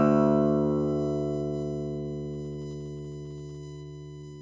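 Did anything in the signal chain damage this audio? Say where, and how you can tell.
Yes. A USB whine sits under the whole clip. It is a fixed 1 kHz tone with harmonics, strongest near 10 kHz, about 25 dB below the signal. USB frame current is leaking through power or ground.

Repeated stalls (stutter) occur in the network and jitter buffer from 2.34 to 3.58 s. About fifteen brief holds, none longer than 14 ms, stretch the sound while the receiver waits for late packets.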